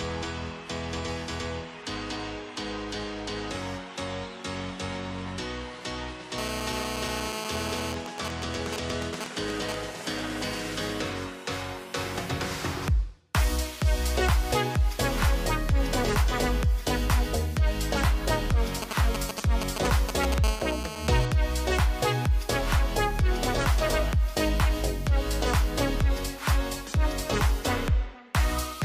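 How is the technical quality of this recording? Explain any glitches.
The recording is marred by interference from a nearby 2G mobile phone, which breaks through twice, each time as a steady buzz and a stretch of pulsed ticking.

GSM phone buzz, 6.38 to 7.93 s and 20.44 to 21.26 s: during a call the phone transmits bursts 217 times a second. The audio circuit rectifies these into a continuous, raspy 217 Hz buzz, about 7 dB and about 9 dB below the signal.

GSM signalling bursts, 7.94 to 9.75 s and 18.82 to 20.34 s: the phone sends only short groups of radio bursts, while its user is silent in a call and during signalling. Roughly 5 dB below the signal, they sound like even ticks with a longer buzz twice a second during the silent call, and a galloping dit-dit-dit of short buzzes during signalling, rather than a continuous tone.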